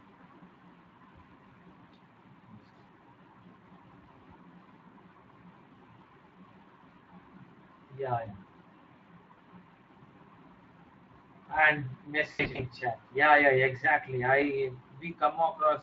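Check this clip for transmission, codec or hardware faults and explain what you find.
Two faults are present: Speex codec damage across the whole clip, and VoIP packet loss concealed by the speech codec at two moments.

Speex codec, throughout: this CELP coder has limited bits for the excitation, which fits a rate near 20 kbps, leaving the speech plainly coarse and noisy.

VoIP packet loss concealed by the speech codec, at 9.33 to 9.39 s and 12.31 to 12.64 s: the decoder extrapolates its last pitch and filter with falling gain. The first gap is about 40 ms. The second is about 180 ms of loss scattered over 280 ms, with runs up to 80 ms, and is heard as fading buzzy or noisy smears.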